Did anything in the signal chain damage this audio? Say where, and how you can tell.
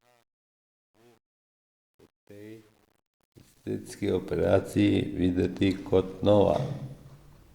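Yes: truncation distortion on the fade-in, 0 to 4.53 s, worst up to 3.56 s. The gain stage truncates to about 10 bits without dither, so the low-level speech turns gritty.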